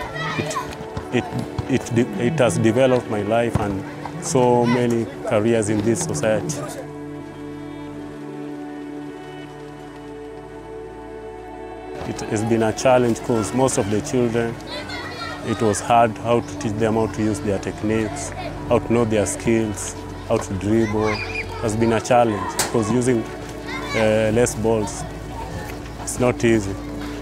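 There's one short patch of DAB burbling at about 12.18 to 12.22 s: a quick few watery blips where single sub-bands pick up short bursts of noise. That sounds like weak reception letting bit errors slip past the error correction into the MP2 data, corrupting samples across a handful of frames. The error rate was only a couple of tenths of a percent.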